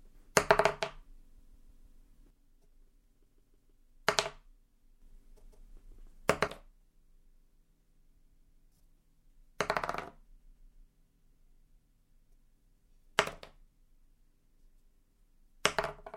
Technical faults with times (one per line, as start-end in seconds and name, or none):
1.37-2.00 repeated frames
2.30-5.02 one channel drops out
3.25-3.73 repeated frames
6.47-16.16 one channel drops out
8.17-8.64 repeated frames
10.39-10.86 repeated frames